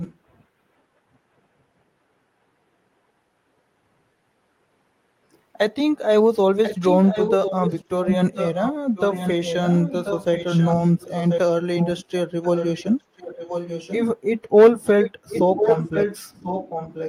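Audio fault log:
0.00–0.16 s, 6.63–11.40 s, 12.43–14.03 s, 15.00–17.08 s: echo leak. A copy of the speech trails by about 1.04 s, roughly 5 to 15 dB below it. This is likely far-end loudspeaker pickup that an echo canceller failed to remove.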